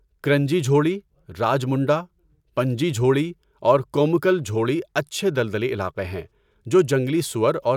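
Speech recording; no technical faults detected anywhere in the clip.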